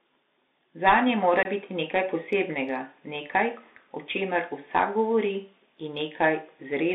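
Throughout the speech, the sound carries Bluetooth CVSD headset codec damage. Its band runs only from about 200 Hz to 3.7 kHz, which fits a 64 kbps CVSD link. The one-bit delta coder's adaptive step lags fast, loud high-frequency content, so sibilants turn scratchy over a constant granular hiss.

From 1.43 to 1.46 s, unconcealed Bluetooth headset packet loss drops about 22.5 ms of audio, which points to a few consecutive packets failing between headset and phone. Nothing fills the gap, so there is a short hole with hard edges, and the speech resumes briefly quieter as the CVSD step size rebuilds.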